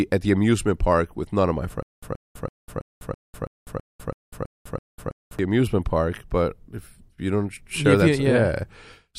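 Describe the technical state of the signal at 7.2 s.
At 7.2 s the speech signal is intact, with no audible fault at that moment.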